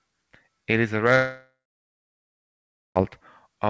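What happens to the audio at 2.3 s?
At 2.3 s the audio is gone: it sits inside a long network dropout running from 1.16 to 2.98 s, just after "is a". The receiver stretches the last sound into a fading buzz or hiss, then about 1.4 s of near-silence follows. This is likely lost packets rather than a deliberate mute, because of the decaying tail and because the audio resumes further on with the gap's content missing.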